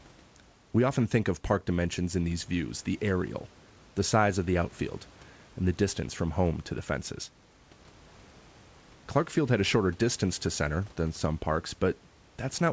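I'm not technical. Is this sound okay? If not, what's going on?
Yes, nothing in this speech recording sounds wrong.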